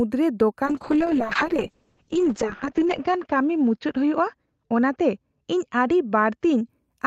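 From 0.66 s the speech goes through a call bitrate drop that lasts until about 6.75 s. The connection's bandwidth estimate fell and the encoder was pushed from roughly 64 kbps down to around 6 kbps. The audio band narrows from 20 kHz to 8 kHz, so everything turns muffled, and the coarser coding makes it rough and watery. The worst stretch, at the lowest rate, runs about 1.6 s before quality climbs back.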